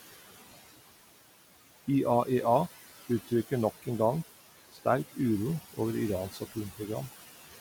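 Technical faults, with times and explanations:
Throughout: noise suppressor artifacts. The suppressor pulls down the frequency bands it judges to be steady noise by about 15 dB, frame by frame, so the room background sinks in pauses and swells back under speech.
6.31–6.57 s: speech cut by the noise suppressor. Here the suppressor mistook part of the speech for background and attenuated it along with the noise, by up to about 14 dB across roughly 150 ms, so those sounds come through swallowed and faint.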